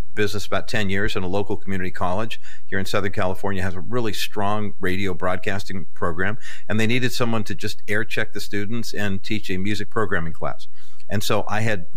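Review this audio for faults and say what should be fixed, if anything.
A DC offset runs throughout: the signal path adds a constant of about -15 dBFS, so the speech waveform sits off zero. You cannot hear it directly, but it wastes headroom, pushing one side closer to clipping, and leaves steady energy at 0 Hz. A high-pass or DC-blocking filter at capture would prevent it.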